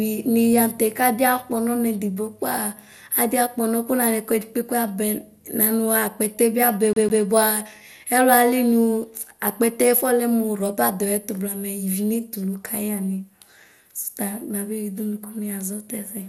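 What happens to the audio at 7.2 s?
At 7.2 s the audio is caught in a CD stuck on one turn, running from 6.93 to 7.24 s. A scratch sends the laser back one track on each revolution, so the same 0.154 s of sound plays twice more, with a brief mute at each jump, giving a quick, even stutter.

Across the whole passage, including this moment, the sound is dull and gurgling with a granular roughness, and nothing reaches above 17.3 kHz. This is likely MP2 compression starved of bits, consistent with roughly 80 kbps. Upper sub-bands drop out and the remaining ones are coarsely quantised.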